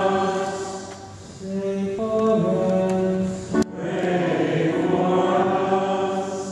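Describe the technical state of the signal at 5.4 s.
At 5.4 s the signal is intact, with no dropout, clipping, distortion or other fault to be heard.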